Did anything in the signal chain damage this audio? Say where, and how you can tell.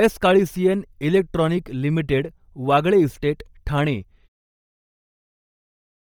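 Yes. Bluetooth LC3 compression runs through the whole speech clip, heavily. It is most likely at the codec stage: a breathy, grainy top end where upper spectrum was zeroed and noise-filled, which fits roughly 32 kbps with 10 ms frames. Nothing sits above about 20.2 kHz.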